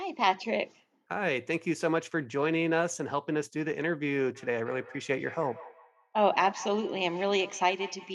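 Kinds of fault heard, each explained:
Feedback echo between two devices: from 4.35 s to the end, the speech returns about 16 dB below the direct sound, at a steady spacing of roughly a fifth of a second. A second device in the same room replays the far microphone's signal, and that microphone picks it up again. Each echo canceller removes only its own device's playback, so the loop survives. Room reverberation smears sound continuously instead, while this echo arrives as a distinct delayed copy at a fixed interval.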